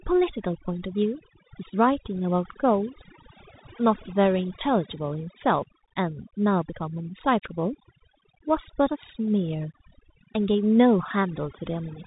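Speech, and it's carrying two problems the whole way through. First, overdone noise removal: the noise reducer was pushed too hard, so any frequency band sitting near its idea of the noise floor gets pulled right down or switched off, and the quieter parts of the voice get dragged under with it. You hear the gaps between phrases drop to near silence with little twinkling specks. Second, the Bluetooth CVSD headset codec: nothing gets through above about 3.8 kHz, which fits the 64 kbps CVSD path used on narrowband headsets. That codec sends one up-or-down bit per sample and adapts its step size, and here the damage is plainly audible. Loud, bright moments outrun the step and break up, s sounds go scratchy, and there's a grainy hiss sitting under the speech.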